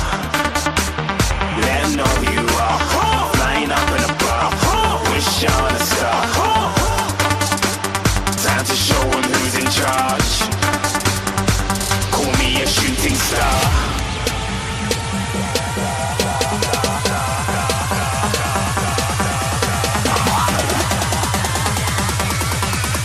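Throughout, the sound is dull, with a gurgling, granular edge, likely from MP2 compression around 80 kbps. A spectrogram shows upper bands flickering on and off.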